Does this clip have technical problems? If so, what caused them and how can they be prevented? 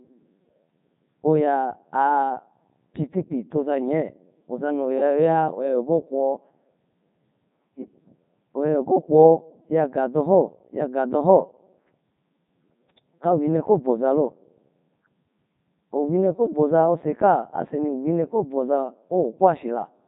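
Yes. Throughout the speech, the audio has been through the Codec 2 vocoder. The codec never carried the waveform, only pitch, voicing, energy and a coarse spectral envelope. The decoder rebuilt the voice from sine waves, so the speech sounds robotic and buzzy, with heavy damage and nothing above 3.8 kHz. The density of detail fits Codec 2's highest 3.2 kbit/s mode. To prevent it, send speech over a waveform codec such as Opus at an adequate bitrate.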